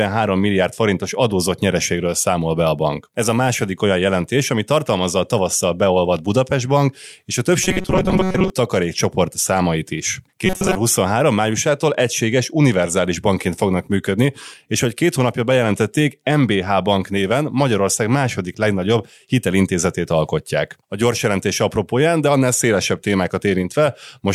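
From 7.63 to 8.50 s, the speech turns into a rigid, metallic buzz. It happens again, more briefly, from 10.46 to 10.76 s. This is robotic sound from repeated short buffers. Both stretches carry a fixed buzz at 188 Hz, which fits a repeated chunk of about 5.3 ms. The likely cause is audio arriving too seldom, with the player looping the last chunk for most of each stretch. The buzz still loosely tracks the speech.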